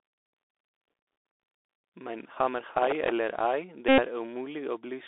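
Throughout, the speech carries the sound of the Bluetooth CVSD headset codec. The band runs only from about 300 Hz to 3.6 kHz, consistent with a 64 kbps one-bit delta coder whose adapting step lags fast, loud high sounds. S sounds turn scratchy over a granular hiss, and a spectrogram shows empty space above 3.6 kHz with a speckled noise floor.

From 2.63 to 3.12 s, processor overload crackle appears. The system missed dozens of deadlines on tiny buffers of roughly a millisecond and a half, and each miss replayed a sliver of old audio with hard edges. It sounds like gritty tearing, and the waveform shows dense small discontinuities, with vertical streaks on a spectrogram.

From 3.89 to 4.00 s comes a repeated Bluetooth headset packet. About 94 ms of voice packets were lost, which fits a run of about 25 packets of 3.75 ms, and the chip kept re-decoding the last one. It is a steady buzz near 267 Hz, seen as a periodic waveform and evenly spaced horizontal harmonics.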